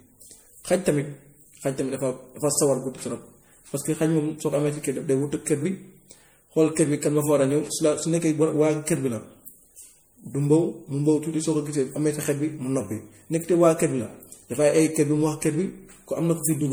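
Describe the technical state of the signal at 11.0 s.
At 11.0 s the speech carries generation loss, present across the whole clip: swirling, hollow, smeared texture with softened consonant attacks. The likely cause is repeated MP3 re-encoding, perhaps three passes at a rate consistent with 64 kbit/s, each requantising on a shifted frame grid.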